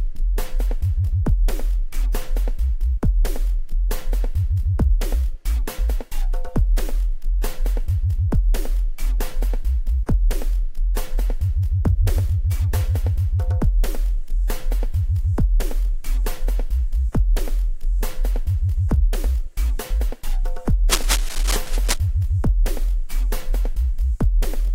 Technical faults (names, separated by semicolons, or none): cable scratch noise